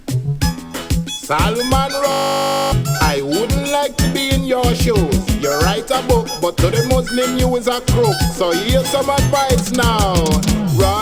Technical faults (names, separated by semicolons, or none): system hang loop